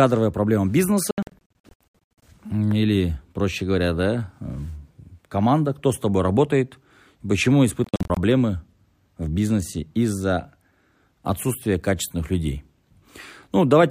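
From 1.11 to 2.22 s, just before "или проще говоря да", the speech breaks into repeated short silences. About 0.6 s is lost across that stretch, and no gap lasts longer than about 70 ms. The speech then resumes further on, as if it kept playing. This is a Bluetooth dropout, likely caused by packets reaching the headphones too late and being discarded. The same stutter returns from 7.84 to 8.17 s, after "с тобой работает почему", with about 0.19 s missing and gaps of up to 46 ms.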